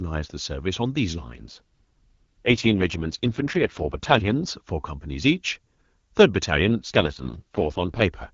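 Speech coded with AMR wideband (HD Voice) shows two AMR rate drops, from 1.18 to 4.48 s and from 6.65 to 8.02 s, where the voice turns rough, raspy and synthetic, which fits a switch from the top 23.85 kbit/s mode down to 6.6 kbit/s. On a spectrogram the band still reaches about 7 kHz with no gaps, but harmonics smear and upper formants grow noisy. The waveform stays continuous and level.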